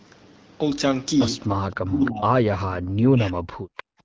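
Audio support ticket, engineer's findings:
Echo leak, likely from the far end's loudspeaker path: the echo canceller let residual echo through, returned about 306 ms late. Short scraps at 1.49, 1.72–1.79, 2.05–2.11 and 3.77–3.83 s, at roughly 10 to 30 dB below the speech.

Speech suppressed in double talk, likely from the same canceller failing to separate near talker from loudspeaker echo during overlap. Talker ducked 1.83–2.3 s (about 25 dB at worst) and 2.99–3.5 s (about 40 dB), dipping and breaking up.

Background gated by the echo canceller: suppressor clamped the microphone hard after the last echo burst. Room sound drops out from 3.83 s to the end at 4.04 s, down about 40 dB, no recovery within the clip. Band limited near 8 kHz by call processing, AMR-WB at 12.65 kbit/s.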